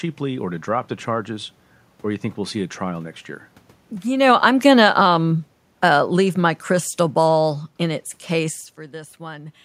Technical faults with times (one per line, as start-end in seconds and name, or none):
4.07-8.66 automatic gain falling